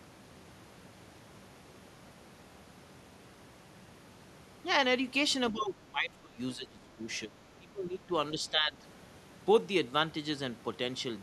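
From 5.52 to 6.4 s the speech sinks sharply, by roughly 20 dB at its deepest. It dips again at 6.56 to 7.03 s and 7.26 to 8.12 s, each about 15 dB down, then more mildly at 8.33 to 8.84 s. This pattern of speech suppressed in double talk likely comes from an echo canceller that could not tell the near talker from far-end echo while both sides spoke, so it attenuated everything.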